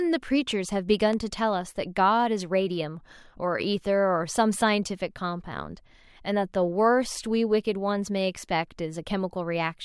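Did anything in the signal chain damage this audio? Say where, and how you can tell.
Yes. A single loud pop at 1.13 to 1.15 s sits a few dB above the speech, which carries on unbroken beneath it. That points to a voltage step, likely from a plug or switch in the analogue wiring. Unlike a dropout or buffer glitch, nothing is lost, only added.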